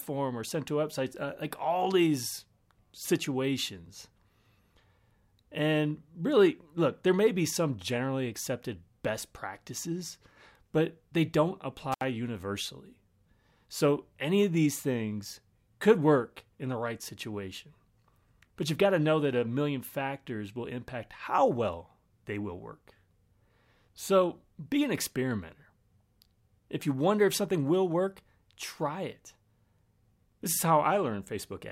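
At 11.92 s, right after "practices but they don't", an intermittent contact briefly opens the signal path for about 71 ms, until 12.03 s. The speech drops out with crackle at both edges; a waveform shows a near-flat gap bracketed by sharp spikes, and a spectrogram shows broadband vertical clicks framing it.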